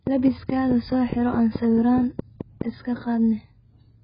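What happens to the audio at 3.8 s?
At 3.8 s the speech sounds dull and smeared, with a fizzy, warbling edge on sustained sounds and sibilants, and nothing above 5 kHz. This is not a local event; it runs through the whole clip. The likely cause is heavy AAC compression at a bitrate that fits roughly 12 kbps. The AAC-LC encoder discarded high frequencies and coarsely quantised the remaining spectral detail, leaving gaps that warble from frame to frame.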